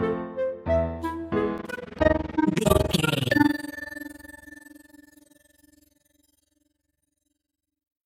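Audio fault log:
1.58–8.06 s, overlap-add ripple: the level pumps about 60 dB deep, roughly 20 times a second, to the end. Windowed frames were rejoined with an overlap that fails to sum evenly. The gain dips once per frame, giving a fast, rough flutter.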